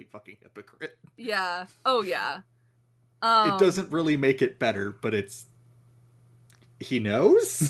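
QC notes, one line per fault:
1.16–2.3 s, 3.21–5.36 s, 6.74–7.59 s: automatic gain rising. Voice and background swell together, gradually, by about 5, 7 and 3 dB, unlike an abrupt level step.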